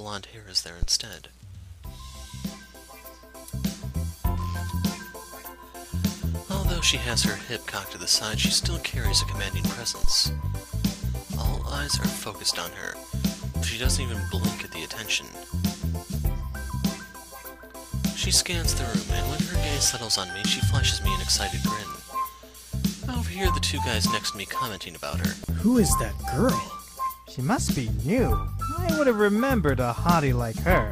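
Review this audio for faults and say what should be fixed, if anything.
Two phantom power thumps occur, at 0.83 to 0.89 s peaking at about -13 dBFS and at 10.04 to 10.13 s peaking at about -9 dBFS. Each is a deep low-frequency pulse that dies away within 15 ms and 21 ms respectively. The supply was switched on or off on the live input, and that voltage step passed through the coupling capacitors as a transient. Mute the channel or fader before switching phantom power.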